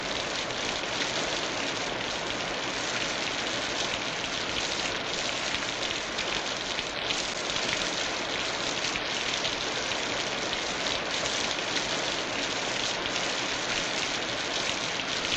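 Nothing goes wrong anywhere in this recording of sounds, so there's no technical fault to point to at any moment.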